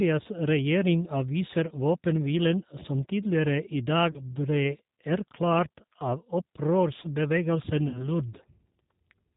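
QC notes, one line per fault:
Throughout: G.729 codec, plainly audible roughness and synthetic buzz; spectrogram shows nothing above 4 kHz, consistent with an 8 kbit/s pulse-coded speech model.
4.11 to 4.19 s: VoIP packet loss concealed by the speech codec, after "våpenhvilen som tidligere i", before "ble erklært"; about 30 ms lost, stretched from the last frame and fading, waveform envelope sagging.
7.88 to 8.08 s: VoIP packet loss concealed by the speech codec, about 60 ms missing; decoder repeats last pitch with falling gain, weak speech afterward.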